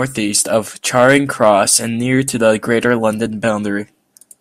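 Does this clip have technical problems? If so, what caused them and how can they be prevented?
Yes. Crackle from 0.97 to 1.76 s, before "and near to the", and fainter crackle from 2.72 to 3.06 s, after it. This is hard clipping: peaks overran the chain's limit, first by about 4 dB, and were cut flat. Lower gain for headroom.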